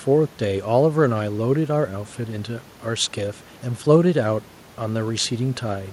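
Listening to this speech recording, nothing stood out as a technical problem.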